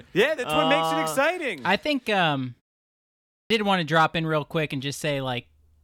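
At 3.29 s, after a 0.76 s pause, comes a clipped start after a pause: the output path apparently slept through the silence and took 0.21 s to wake, so speech bursts in abruptly on "want to drop in". The waveform shows a hard edge with no onset ramp.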